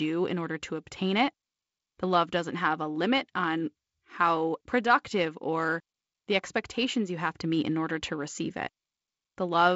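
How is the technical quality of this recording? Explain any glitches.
No glitches to speak of here: the speech comes through G.722 wideband telephone coding at 48 kbit/s, which simply leaves nothing above about 7.7 kHz, and there's nothing in it that counts as a fault.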